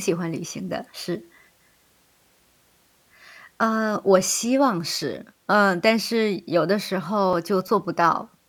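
From 6.99 to 8.02 s the speech carries CD scratch ticks: seven tiny clicks about seven per second, each a few milliseconds at most. A scratch defeats error correction once per disc turn, so the player patches samples. That steady rotational spacing separates it from random crackle.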